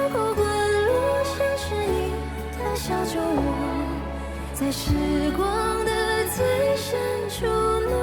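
Nothing in the sound stood out as a technical problem on listening.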